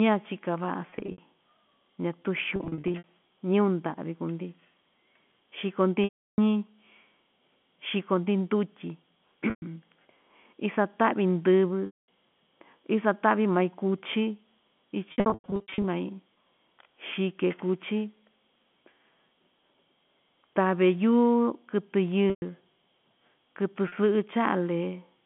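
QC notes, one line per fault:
0.90–1.18 s, 2.56–3.04 s, 6.04–6.38 s, 9.50–9.62 s, 11.86–11.98 s, 15.12–15.84 s, 22.30–22.42 s, 23.88–23.92 s: packet loss with pitch repetition. Between 40 and 460 ms of audio is missing in each event, sometimes scattered in short runs, which fits 20 ms packets. The last pitch period is repeated across each gap, so the sound briefly holds with a buzz and then fades out on the longer runs.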